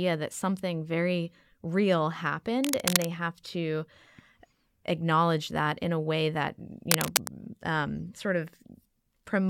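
From 2.64 to 3.05 s and again from 6.87 to 7.28 s, dense, uneven bursts of scratching cut across the speech, about as loud as it. This cable scratch noise likely comes from a worn cable, connector or control whose contact resistance shifts rapidly when moved.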